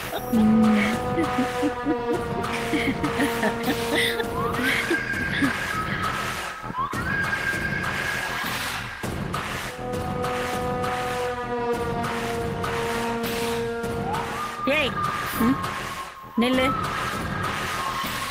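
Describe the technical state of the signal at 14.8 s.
The signal is intact at 14.8 s, with no dropout, distortion or other technical fault audible at that point.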